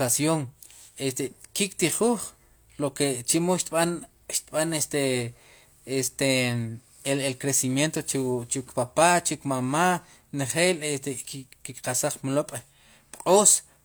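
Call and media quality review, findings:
Nothing in the speech recording stood out on listening.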